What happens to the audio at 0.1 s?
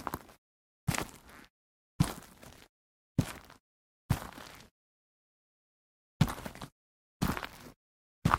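Nothing goes wrong at 0.1 s; the sound plays through that moment intact, with no dropout, click or other fault.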